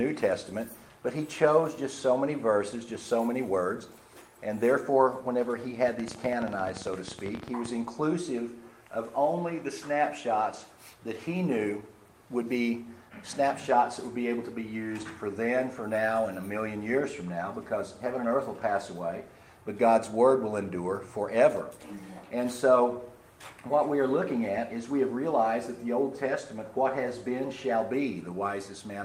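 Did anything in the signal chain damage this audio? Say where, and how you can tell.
Yes. From 5.88 to 7.67 s a train of clicks ticks over the sound: about 30 near-identical pops, irregularly spaced at roughly 15.8 per second and peaking about 10 dB above the signal. This is likely interference coupling into the analogue wiring or a faulty connection or power supply.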